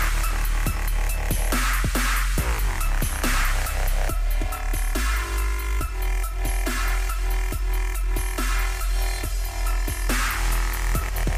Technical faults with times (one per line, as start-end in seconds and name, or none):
4.09-10.09 channel delay (comb filtering)